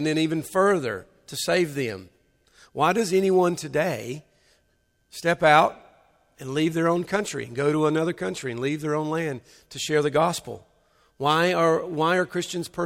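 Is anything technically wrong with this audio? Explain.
No, nothing technically wrong turns up anywhere in this speech recording.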